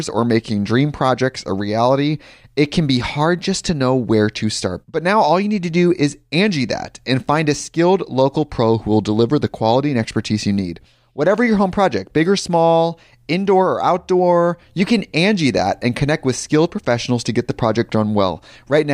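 No audible technical faults.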